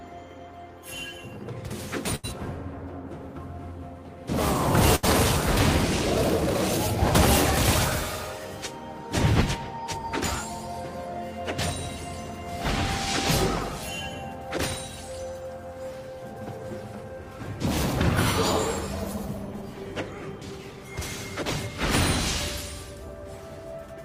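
At 2.15 s and again at 4.95 s, the sound briefly freezes into a held, fading smear for about 80 ms before jumping ahead. Each is a burst of packet loss: a run of packets never arrived in time, so the receiver stretched the last sound it had and let it decay. When audio resumes, about 80 ms of material is gone, which is why the two gaps end in an abrupt skip.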